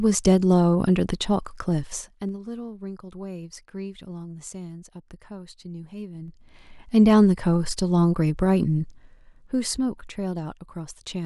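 A ticking, zipping texture rides on the speech from 1.82 to 2.42 s as the level drops about 15 dB, again from 6.12 to 6.65 s as it rises about 15 dB, and more slowly from 8.78 to 10.19 s during a fall of about 10 dB. This is zipper noise: the gain moves in unsmoothed steps of about 2 dB, roughly fifteen per second in the first two changes and about four per second in the last, and each jump clicks.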